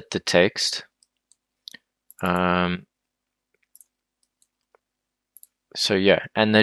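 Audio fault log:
No faults found; nothing in the audio calls for an entry.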